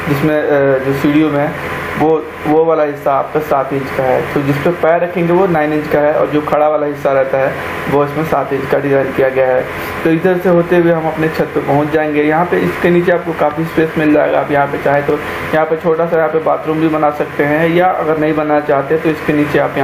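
Gain pumping runs throughout, likely from input gain set far too high with a fast limiter clamping down; the gain swings by about 15 dB.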